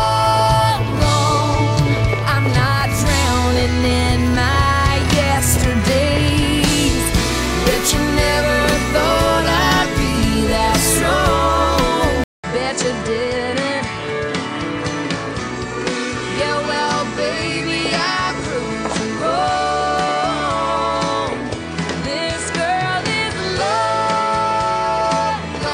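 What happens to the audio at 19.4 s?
At 19.4 s the sound is duller and a little quieter than in the first half, with nothing above 9.6 kHz and a different, faint background noise sitting well below the signal. That character sets in at 12.24 s, after a 200 ms gap, and lasts to the end. The likely cause is an input switched to a poorer device: a second input with a narrower band, its own gain and its own noise took over mid-recording.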